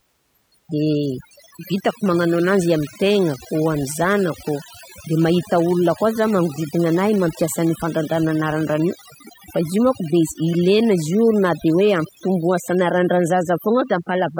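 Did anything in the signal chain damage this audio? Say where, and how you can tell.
Yes, overdone noise removal at the noise-reduction stage, running the whole way through. The suppressor is cranked so hard that bands sitting near its noise estimate get gated out, taking quiet speech detail with them: the background collapses into twinkly near-silence.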